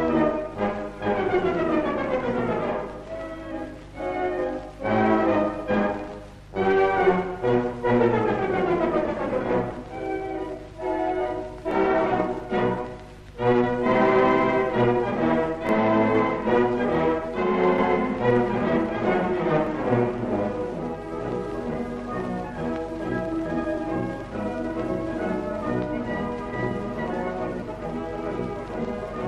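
Brief skips occur at 11.71, 15.69, 19.67, 23.64 and 27.62 s, each losing about 20 ms with abrupt joins. The steady 4 s spacing points to audio likely missing between chunks.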